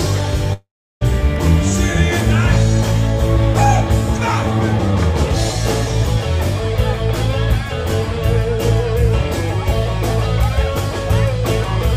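From 0.53 to 1.03 s there is a long network dropout, most likely from the connection stalling. The last sound is stretched into a fading buzz or hiss, which gives way to roughly a third of a second of silence. When the audio returns it has jumped ahead, so about half a second is simply missing. A brief packet loss would be smoothed over in a few milliseconds. Here the fill visibly runs out, and the sound resumes further along.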